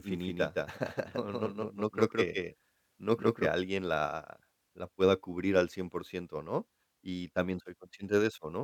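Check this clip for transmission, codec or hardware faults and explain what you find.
There's one fault here, a doubled audio track running from the very start of the clip to 3.48 s, where it cuts off abruptly just before "alguien la la pueda". A second full-band copy of the speech trails the original by roughly 150 ms at around 5 dB quieter, with no decay or room colour. That gives a dry, slapback-like smear. The likely cause is the signal being picked up a second time over a slower path.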